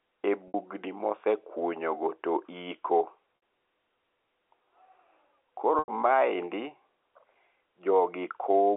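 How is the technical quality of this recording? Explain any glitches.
It's telephone-band speech, topped out around 3.5 kHz by G.711 coding, with three short dropouts. The packet loss with pitch repetition at 0.48 s (60 ms, just before "mosekunyo go"), 3.36 s (60 ms) and 5.79 s (90 ms) comes from the receiver looping the last pitch period to fill each gap, which gives a brief buzzy, held sound.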